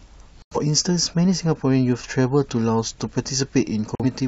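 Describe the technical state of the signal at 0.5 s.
At 0.5 s the signal is inside a corrupt frame muted gap running from 0.42 to 0.57 s, about 0.15 s of silence that points to two compressed frames lost together. Damaged bits made the decoder reject those frames, and the player filled their slot with digital silence. The hole opens abruptly, and the speech resumes on schedule with no shift in timing. That separates it from concealment, which would smear in synthetic sound, and from a buffer dropout that delays everything after it.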